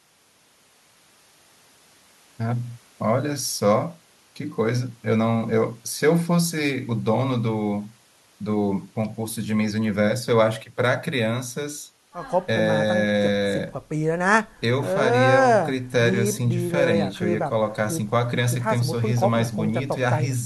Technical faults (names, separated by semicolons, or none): none